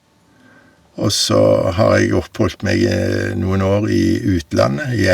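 From the first moment until 1.03 s the speech sounds roomy and hollow, thin in the bass, at much the same level as what follows, with faint room noise well below it. This is likely a switch to a distant microphone. A spectrogram shows weak low frequencies and smeared reverberant tails until the abrupt change at 1.03 s.

Microphone overload, likely from input gain set too high, cuts off the loudest peaks with a harsh, crackling edge at 1.35 to 1.53 s, 1.81 to 1.98 s, 4.59 to 4.64 s and from 5.09 s to the end. The peaks overshoot the limit by about 1 to 5 dB. The waveform shows flat-topped peaks, and the spectrogram shows broadband smears above the voice.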